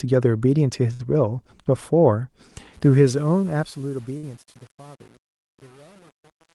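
From 0.93 to 1.01 s a burst of packet loss removes about 60 ms of the speech. The last sound is stretched and faded into a short buzz or hiss, and then the audio jumps ahead. That decaying fill is what sets it apart from a plain dropout to silence.

From 2.74 s, as the fade-out gets quiet, truncation distortion on a fade sets in. It is worst from 3.26 s to the end. Instead of thinning smoothly, the tail turns gritty, which fits a stage keeping only about 8 bits with no dither.

At 4.17 to 4.25 s a second burst of packet loss covers about 56 ms with a fading continuation before the audio resumes further on, with about 60 ms missing.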